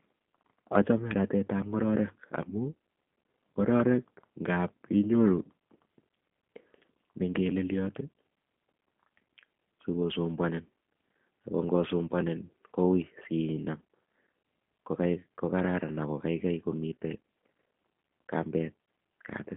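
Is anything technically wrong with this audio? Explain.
Yes. Throughout the speech, the audio carries the sound of the G.729 codec, with a narrow telephone band running from roughly 200 Hz to 3.4 kHz and nothing at all above 3.6 kHz. The codec rebuilds each frame from a vocal tract filter, a pitch predictor and a handful of pulses rather than the original waveform, which points to an 8 kbit/s G.729A link. The result is plainly audible: the speech sounds dull, slightly rough and synthetic.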